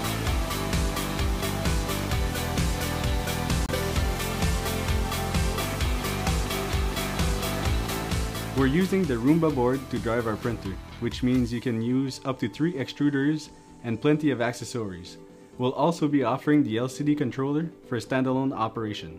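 At 3.66 s the audio cuts out for roughly 30 ms and comes back at 3.69 s, a short hole that sounds like a tick or stutter. This is most likely a Bluetooth dropout: packets missed their deadline on the wireless link and were discarded, which fits about two lost frames (28 ms). Playback resumes where it would have been, not where it stopped. A waveform shows a flat-line gap; a spectrogram shows a thin vertical band empty across all frequencies.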